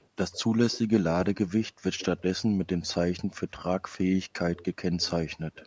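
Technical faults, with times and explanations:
0.00–0.07, 0.32–0.41, 0.71–0.80, 1.98–2.22, 4.55–4.65 and 5.54–5.66 s, echo leak: faint copies of the speech trail about 142–146 ms behind, some 20–40 dB below it. This is likely an echo canceller passing loudspeaker pickup back. On a spectrogram, weak duplicate harmonic patterns appear shifted right.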